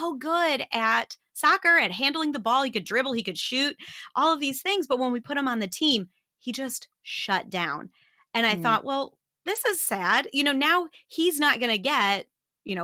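Lost packets rebuilt from error correction occur at 5.77–5.95 s, 7.71–7.73 s and 9.55–9.57 s. Low-bitrate backup copies fill the holes, so the speech turns briefly rough and noisy rather than dropping out. The waveform shows no gap, while the spectrogram shows smeared, noisier patches.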